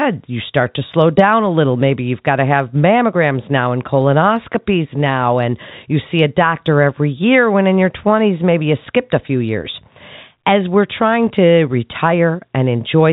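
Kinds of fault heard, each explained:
Nothing stood out on listening to the speech.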